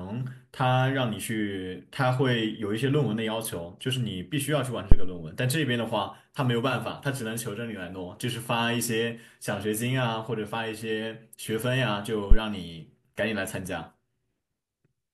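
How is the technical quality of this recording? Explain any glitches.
The recording has one clear glitch, a phantom power thump from 4.92 to 5.15 s. A supply was switched on or off on a live microphone input, and that sudden voltage step passed through the coupling capacitors into the speech path. It comes out as a deep low thump peaking near full scale, about -1 dBFS, then dying away with a decay of roughly 53 ms.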